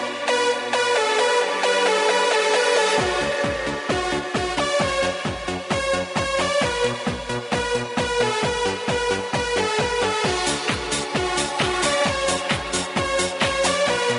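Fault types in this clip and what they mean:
No technical faults can be heard anywhere in the signal.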